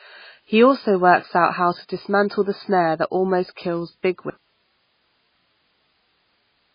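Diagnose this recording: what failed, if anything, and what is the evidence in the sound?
MP3 compression runs through the whole clip and is the codec-stage fault. The speech has nothing above 5 kHz, and the heavy damage sounds watery and swirly, with smeared consonant onsets. That points to a likely MP3 encode at a very low bitrate, which fits roughly 16 kbps. Short of bits, the encoder cut the treble at a fixed frequency and zeroed weak spectral lines, which flicker between frames.

An audio dropout to a faint residue begins at 4.3 s, right after "snare that almost kills", and lasts to the end. The speech stops abruptly rather than fading, and only hiss remains, about 45 dB below the speech level. Because the path after the break stayed live, the cause is likely a loss of the wanted signal upstream, in the wiring or capture stage, not a muted or stopped recorder.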